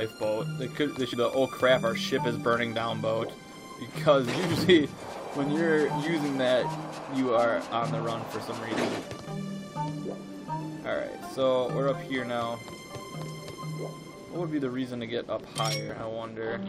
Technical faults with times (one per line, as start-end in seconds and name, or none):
1.13 damaged data in a compressed stream
3.52 damaged data in a compressed stream
15.89 damaged data in a compressed stream